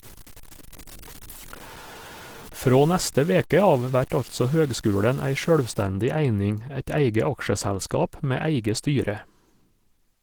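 From the start to about 5.83 s, the speech carries gritty distortion that rides along with it, sitting roughly 20 dB down. That's likely low bit depth without dither: truncation to about 6 bits. The whole clip also sounds muffled and hoarse, which fits Opus compression in its hybrid speech mode at a likely 16 kbps.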